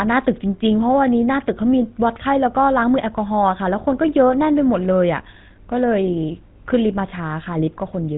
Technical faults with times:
0.00-8.17 GSM full-rate codec

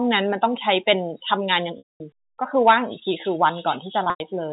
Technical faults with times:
1.78-2.00 packet loss with pitch repetition
4.04-4.20 packet loss with pitch repetition

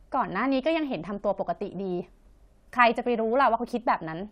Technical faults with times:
none

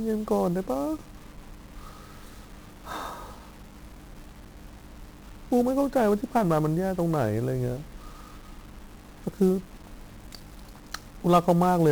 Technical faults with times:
0.00-11.91 1-bit DFPWM compression

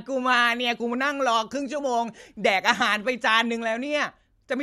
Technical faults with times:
none

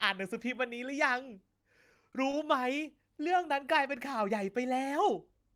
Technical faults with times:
1.61-2.79 repeated stalls (stutter)
3.18-4.57 jitter buffer slow-down

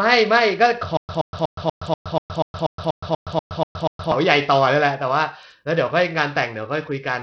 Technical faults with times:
0.00-7.22 Bluetooth SBC compression
0.97-4.12 stutter with silent gaps

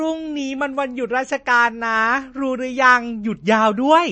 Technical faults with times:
0.00-4.11 MP3 compression

